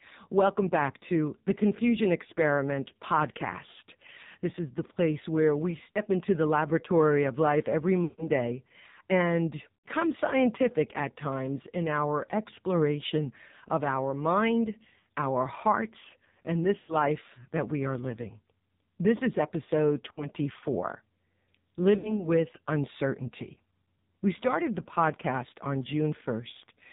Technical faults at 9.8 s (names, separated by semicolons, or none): AMR narrowband mobile codec; lost AMR speech frames